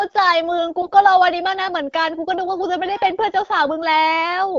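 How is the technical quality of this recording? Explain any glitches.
One short glitch stands out in this wideband AMR-WB speech, which sounds consistent with the 12.65 kbit/s mode. From 0.82 to 0.90 s the speech turns hoarse, scratchy and gargly while keeping its pitch and level. These are AMR bit errors: flipped low-priority bits, across what sounds like about five frames, misplaced the excitation pulses and skewed pitch, gain and spectral detail.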